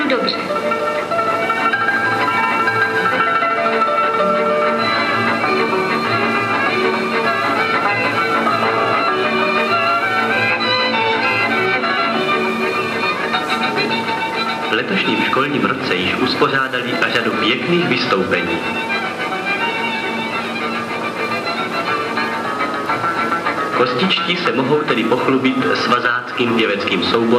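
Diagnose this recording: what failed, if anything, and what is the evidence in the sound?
A faint, steady ticking runs under the sound for the whole recording, about ten ticks a second, quiet, at roughly 35 dB below the signal. This is Wi-Fi interference picked up in the analogue wiring. A Wi-Fi radio sitting close to the audio circuit sends a beacon every 102.4 ms. The circuit rectifies each radio pulse into a small audio-band click, so the beacon rhythm shows up as an even tick.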